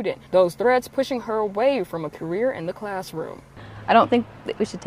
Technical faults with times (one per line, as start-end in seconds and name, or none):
none